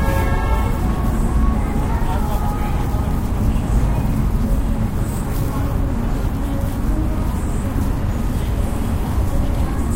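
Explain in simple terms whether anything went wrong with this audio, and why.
Something did go wrong. From 1.06 s to 9.28 s there are periodic USB or driver dropouts. About every 1.02 s, roughly a millisecond of sound is skipped. The gaps are heard as regular ticks while sound is playing. Something in the system briefly stalls the audio link, about ten times.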